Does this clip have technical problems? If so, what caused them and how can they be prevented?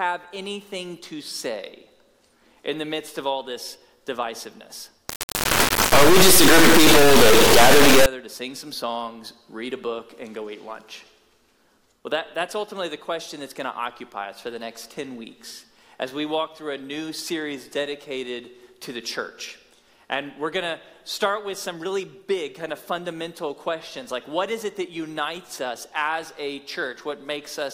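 Yes. From 5.09 to 8.06 s the audio turns into an extremely loud, harsh buzzing square wave. This is an integer read as float fault: 32-bit integer samples were interpreted as 32-bit floating-point values. Those bit patterns decode to numbers that are either nearly zero or far beyond full scale, so the output slams between silence and the clipping limit instead of following the original waveform. To prevent it, carry the sample format through the signal chain explicitly and check that the reader's declared type matches the writer's before decoding.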